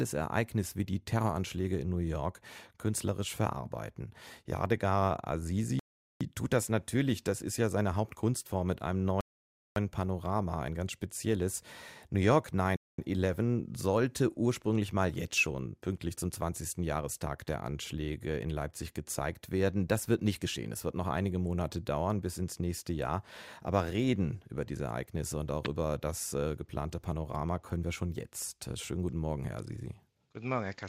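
Rebuffering stalls at 5.79 to 6.21 s, just before "tut das natürlich das", at 9.21 to 9.76 s after "mit einem", and at 12.76 to 12.98 s. Each time, playback runs out of downloaded audio, so the speech drops to silence for 0.41, 0.56 and 0.22 s respectively and then picks up exactly where it left off. No speech is lost, but each gap adds that much time.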